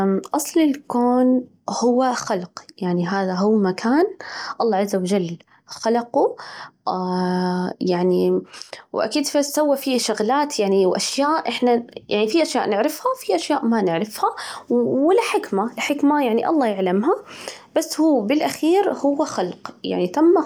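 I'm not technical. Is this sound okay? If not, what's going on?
Yes, no faults heard.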